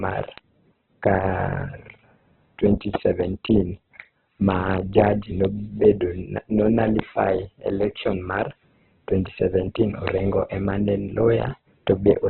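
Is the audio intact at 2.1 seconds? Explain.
No. At 2.1 seconds the speech carries Opus compression damage, present across the whole clip, not a local event. It sounds narrowband, rough and grainy: nothing survives above 4.1 kHz, and the remaining tones are smeared into noise. This is likely from a very low bitrate, which fits about 8 kbps in CELT mode, where starved bands are filled with folded or noise energy. A spectrogram shows a flat ceiling at 4.1 kHz and speckled, blocky texture below it.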